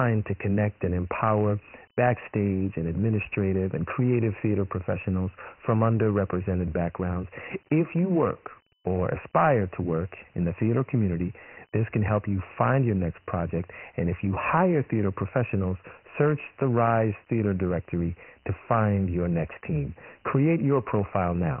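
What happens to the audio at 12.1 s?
At 12.1 s the speech sounds muffled and gritty, with hiss trailing it and nothing above 3 kHz. This is Dialogic VOX ADPCM throughout, heavy 4-bit coding fitting 24 kbps at 6,000 samples a second.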